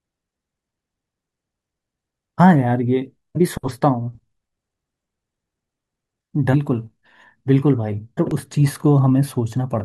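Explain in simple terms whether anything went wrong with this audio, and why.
Damaged data in a compressed stream shows up three times in this speech, at 3.35, 6.53 and 8.17 seconds. Each is a tiny chirp or blip lasting just under a fiftieth of a second. Part of the compressed file was wrong at those spots, so the decoder could not read the frames there properly, lost its place, and skipped ahead to the next frame it could recognise. That skip is what makes the brief squawk.

A repeated buffer follows at 8.31 seconds and is heard as a click or brief buzz. Fresh audio did not reach the playback device in time, so it played the last small chunk again, about 1.3 milliseconds, once more with a hard join. A chunk that short fits a 64-sample buffer, which is why it comes out as a click or brief buzz rather than a stutter. Roughly a millisecond and a half of sound is lost there.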